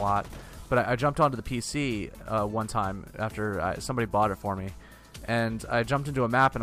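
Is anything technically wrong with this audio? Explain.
Yes. Hard clipping occurs from 1.22 to 1.25 s and from 6.39 to 6.47 s. Peaks exceed what the signal path can carry by about 2 dB and about 3 dB. They are flattened, adding high harmonics that sound like brief crackle on those loud moments.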